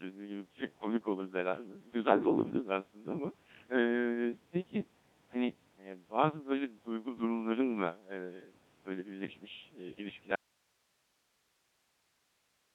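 Throughout, the speech carries the robotic, buzzy quality of a Codec 2 vocoder, most likely running at a very low rate around 1.3 kbit/s, rebuilt from sine waves. A spectrogram shows harmonic combs and nothing above 3.8 kHz. At 10.36 s an audio dropout to a faint residue cuts the signal abruptly until the end, leaving only hiss roughly 45 dB down, a flat, near-empty trace on the waveform.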